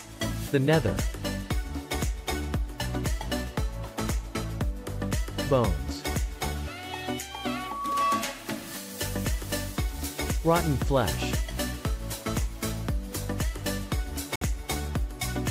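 A Bluetooth dropout occurs from 14.36 to 14.42 s, near the end of the clip. The sound cuts out for about 56 ms, then returns further along, as though it had carried on during the gap. The likely cause is audio packets failing to reach the headphones in time and being discarded, leaving the output silent until valid data arrived again. A hole this long fits roughly three lost packets.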